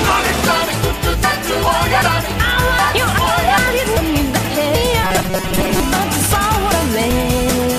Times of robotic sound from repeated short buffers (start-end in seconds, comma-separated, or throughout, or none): 5.04-5.80